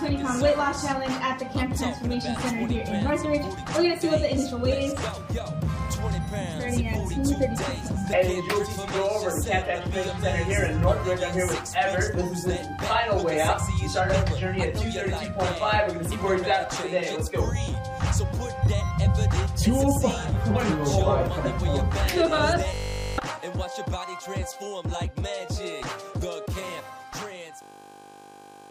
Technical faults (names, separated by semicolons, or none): system hang loop